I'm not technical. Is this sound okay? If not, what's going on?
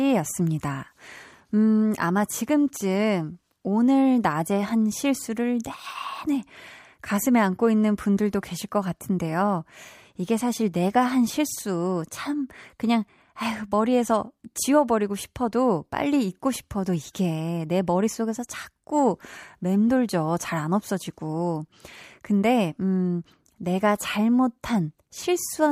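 Yes, no audible faults here.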